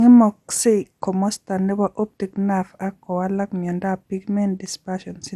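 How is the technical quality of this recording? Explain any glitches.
The technical quality is compromised by one fault that runs through the whole speech clip: generation loss. The likely cause is that the audio went through a lossy codec about four times, with a character that fits MP2 at around 96 kbit/s. Each re-encode quantised the signal again on a shifted frame grid, so noise piled up. The result sounds swirly, hollow and smeared, consonant attacks are blurred, and nothing remains above 15.5 kHz.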